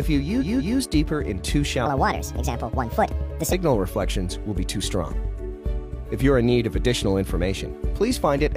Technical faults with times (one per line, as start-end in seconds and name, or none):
0.37-0.75 repeated frames
1.86-3.53 section at the wrong speed